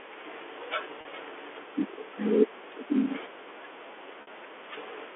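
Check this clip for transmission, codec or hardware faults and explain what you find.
Two brief dropouts are the only faults heard, both packet loss with pitch repetition, over a telephone-band G.711 path whose content stops near 3.4 kHz. The first is at 1.01 to 1.05 s, bridging about 40 ms; the second at 4.22 to 4.27 s, about 50 ms. The receiver filled each gap by looping the last pitch cycle, which sounds like a momentarily frozen, buzzy tone. The sizes fit 10 ms packets. A waveform shows identical repeating cycles; a spectrogram shows flat, unchanging harmonics.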